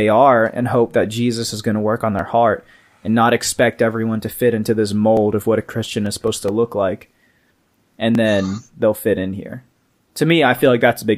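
At 2.19 and 5.17 s, audio is missing between chunks, likely because the processor drops a sliver while switching 3-second blocks. Roughly 20 ms vanishes, and the sides butt together as a quick skip. From 5.85 to 7.11 s, CD scratch ticks appear: a blemish defeats error correction once per disc turn, leaving seven brief ticks, the longest a few milliseconds. At 8.15 s the same chunk-boundary skip recurs, about 3 s after the last.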